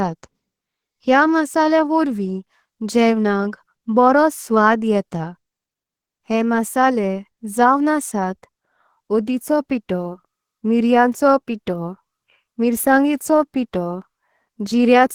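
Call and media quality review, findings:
Opus compression, throughout: speech muffled, hoarse, grainy; likely hybrid-mode Opus encoding, fitting a 16 kbps rate, starving bands despite content reaching about 20.3 kHz.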